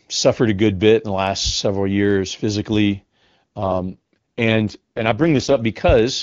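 From 3.57 to 5.60 s there's an AMR rate drop. The codec falls back, which sounds like the 6.6 kbit/s mode, so speech turns rough and raspy before clearing up.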